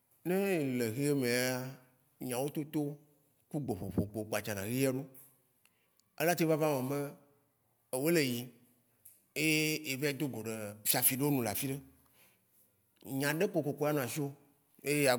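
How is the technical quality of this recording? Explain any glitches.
No technical faults can be heard anywhere in the speech recording, so there are no glitches to explain.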